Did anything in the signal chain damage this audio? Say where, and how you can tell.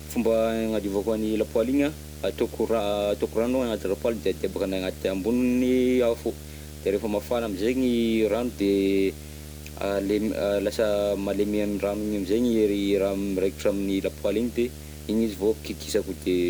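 Yes. Video or display buzz runs through the whole speech clip, from start to finish. It is a 75 Hz buzz with hash above it, sitting only about 15 dB below the speech. The damage happened in the analogue wiring: a screen or video cable near the audio path coupled its picture refresh into the signal. A buzz at 75 Hz rather than at mains frequency points to a display running at a 75 Hz field rate.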